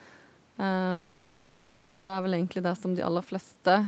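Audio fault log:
0.91–2.11 s, long network dropout: the last sound smears into a fading buzz and hiss, then resumes with about 1.2 s of audio missing. This is likely a run of lost packets, with the receiver filling the entire gap by extending what it last received.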